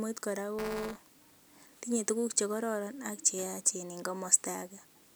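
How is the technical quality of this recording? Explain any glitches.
The recording has one glitch. From 0.58 to 1.39 s, just before "tinye tuguk chekororon ak", a robotic 200 Hz buzz rides the speech. This is buffer tearing: write and read positions crossed, splicing in a small slice of audio from around 15 ms earlier every period.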